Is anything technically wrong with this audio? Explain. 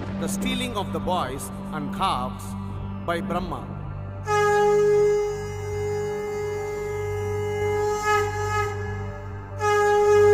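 Yes. From 7.61 s to the end, there is a doubled audio track: a second, full-band copy trails about half a second behind, somewhat quieter, likely from a slower capture path. Unlike an echo, it starts abruptly and repeats without decay or room colour.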